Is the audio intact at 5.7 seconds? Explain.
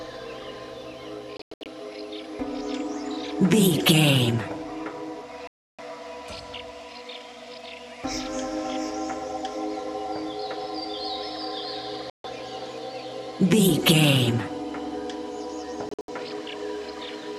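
No. At 5.7 seconds the sound sits inside a digital broadcast dropout running from 5.47 to 5.79 s. The receiver stopped getting decodable frames, either because the signal was lost or because frames failed their checksum, so it muted its output until clean frames arrived again. About 0.31 s of programme is gone, consistent with a dozen or so discarded frames. The audio cuts or quickly fades to silence, then resumes further along, with nothing of the missing stretch recovered.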